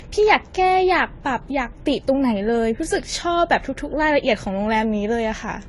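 Transcoding between lossy codecs runs throughout the speech. Nothing is present above about 11.5 kHz, and two layers of coding artefacts sit together. The likely cause is a low-rate AAC pass re-encoded to Vorbis near 34 kbit/s, each stage adding its own artefacts.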